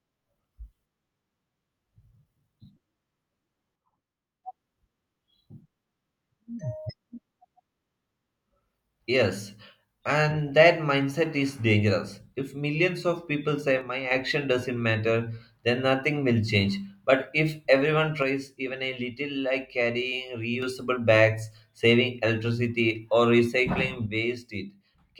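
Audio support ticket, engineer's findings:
One channel drops out, 3.76–4.44 s, 13.81–14.11 s (after "millions of people say", before "doesn't matter then nothing"), 18.22–20.62 s (after "if everyone", before "bags saving electricity or"), 24.06 s to end (after "saving electricity or recycling"). Speech level falls abruptly by about 6 dB, then recovers, except the last, which runs to the end. Likely a stereo channel lost upstream of the mono sum, halving the shared signal and removing anything carried only on that side.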